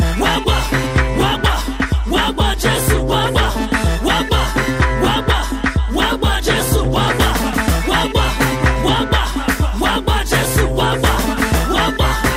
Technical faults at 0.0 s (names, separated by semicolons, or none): none